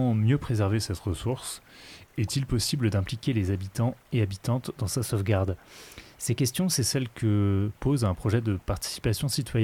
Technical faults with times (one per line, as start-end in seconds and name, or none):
0.73-2.76 drift correction step
5.03-6.81 drift correction step